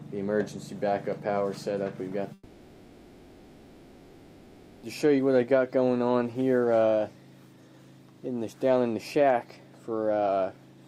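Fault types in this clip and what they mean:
long network dropout: likely lost packets; from 2.33 to 4.88 s a fading buzz replaces the sound, with smeared, flat spectrogram bands and 2.5 s lost.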